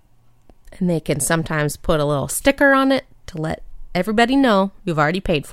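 No technical faults can be heard in this recording.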